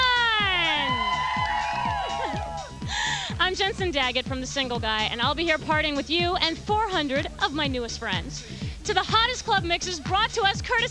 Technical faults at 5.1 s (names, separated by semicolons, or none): none